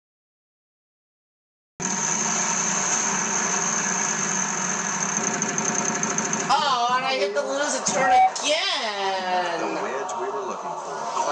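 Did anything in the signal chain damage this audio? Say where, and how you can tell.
Yes. A cut-off start at the beginning: the clip is silent until 1.80 s, then the sound enters mid-event with no attack or fade-in. This points to the recording or stream starting late. Unlike a dropout, the silence occurs only once, at the opening.

A loudspeaker feedback squeal occurs at the analogue acoustic stage from 7.89 to 8.33 s. A single 755 Hz tone swells over about a third of a second to about 10 dB above the programme. It comes from the microphone re-amplifying its own loudspeaker. Unlike steady hum, it grows by itself and then stops.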